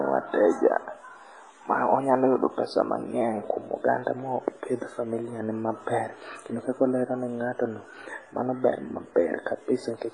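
A speech clip, likely pushed through WMA compression at a low bitrate, and the damage is heavy throughout: nothing survives above 10.4 kHz, quantisation noise smears into a ringing, washy hiss that swells and fades with the sound, and weaker detail drops out, which fits roughly 24 kbps.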